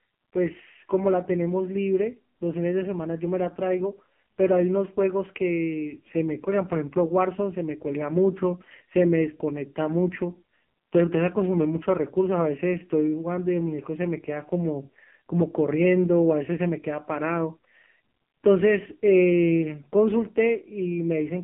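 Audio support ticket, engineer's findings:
AMR narrowband mobile codec, whole clip: band-limited 150 Hz to 3.4 kHz, nothing above 3.5 kHz; heavy buzzy, synthetic speech from sparse pulse excitation, consistent with a low mode near 5.9 kbps.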